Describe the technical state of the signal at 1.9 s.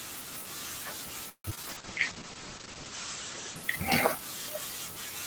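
At 1.9 s a call bitrate drop is under way (1.70 to 4.46 s). The encoder falls from 32 to 9 kbps and bandwidth narrows from 20 kHz to 8 kHz, so the speech sounds coarse and muffled. Overlapping it, a jitter buffer slow-down (1.74 to 2.20 s) repeats pitch periods to rebuild reserve. It adds 67 ms and plays at 87% speed, drawing the sound out at unchanged pitch.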